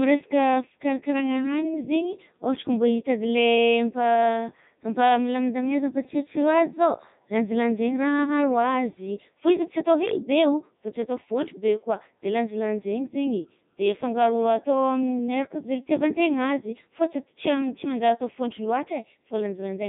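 From start to finish the speech sounds robotic and buzzy, with nothing above about 3.8 kHz. This is heavy Codec 2 vocoder damage, consistent with its 3.2 kbit/s mode: only pitch, voicing, energy and spectral shape survive, and the decoder rebuilds the voice from sine waves.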